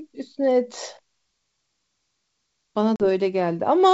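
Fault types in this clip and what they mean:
Packet loss on an ADPCM call: about 40 ms of speech, likely a couple of packets, drops into a hard-edged silence near 2.96 to 3.02 s. The decoder's predictor and step size drift from the sender's. Speech returns roughened, settling within tens of milliseconds.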